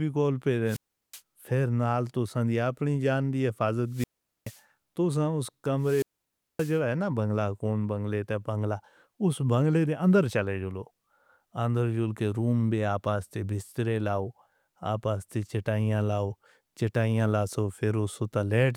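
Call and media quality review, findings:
Wireless microphone squelch dropout at 0.65–1.22 s, 3.88–4.62 s and 5.78–6.81 s. Hiss rises, then the output mutes for about 370, 430 and 570 ms. Receiver squelch closing on a fading FM signal. Second follows "دی اپنی جان دی", third precedes "ہے نا بنگلہ کون".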